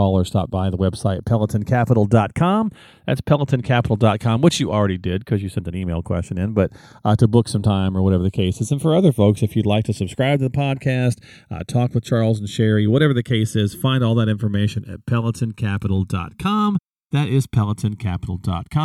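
A speech recording with a slow flanging sweep throughout: channels drifting apart, their clocks differing by around 70 parts per million, sliding the inter-channel delay to about a millisecond.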